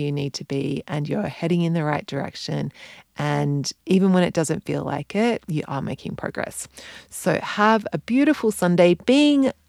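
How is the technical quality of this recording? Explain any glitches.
No technical glitches can be heard in this recording.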